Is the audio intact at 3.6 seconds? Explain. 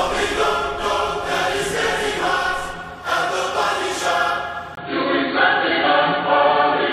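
No, not quite. At 3.62 s there's an overlap between stream segments: two chunks of the stream claim the same stretch of time, so the player trims the shared part away, even though that audio wasn't actually duplicated. Around 8 ms of real sound goes missing, and the waveform jumps straight from one side of the gap to the other. You hear that as a single small click or a tiny skip.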